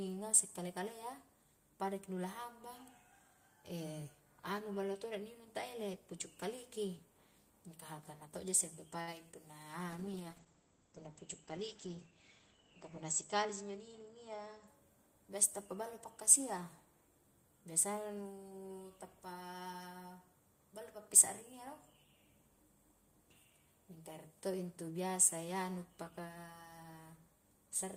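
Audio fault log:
9.01 to 9.09 s, short stall from a late packet: a packet arrived late, the jitter buffer ran dry, and the receiver held the last bit of speech for about 60 ms until it came, then carried on from the same point, so nothing is lost but the sound hangs briefly, adding 60 ms of delay. On a spectrogram the harmonics run flat and unchanging across that stretch; the waveform shows a repeated cycle with slightly sagging amplitude.
9.31 to 9.35 s, short concealed packet loss: about 20 ms of audio never reached the decoder, and the receiver covered it with 13 ms of synthesized continuation before blending back into real signal, heard as a quick smear or wobble where a short consonant may drop out. A spectrogram shows a thin blurred slice where fine detail and transients vanish; the waveform shows a smooth, slightly altered patch with a soft seam at each end.
9.88 to 14.74 s, call bitrate drop: the call's bandwidth estimate fell and the encoder went from 32 to 12 kbps, holding the lowest rate for about 3.2 s, and audio bandwidth shrank from 20 kHz to 8 kHz, so speech turns muffled and rough or watery. 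On a spectrogram everything above 8 kHz is abruptly blank for the span, with coarser, patchier energy below; the waveform changes little beyond losing some sharpness.
13.28 to 14.09 s, jitter buffer speed-up: too much audio had built up, so the receiver trimmed pitch-period pieces many times over, roughly 70 ms in all, playing about 8% faster at unchanged pitch, which sounds hurried. A spectrogram keeps harmonic spacing the same while syllables and gaps look compressed in time; the waveform shows shortened segments with tiny splice points between cycles.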